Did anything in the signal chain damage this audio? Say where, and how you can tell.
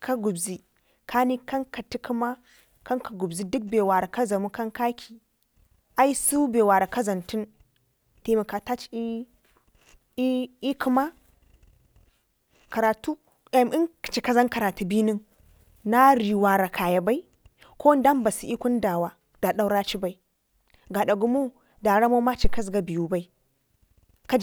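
Yes: a phantom power thump at 22.44 to 22.70 s in this speech, in the analogue input stage. A supply was switched on or off on the live input, and the voltage step through the coupling capacitors gives a deep thump peaking at about -7 dBFS that decays within 58 ms.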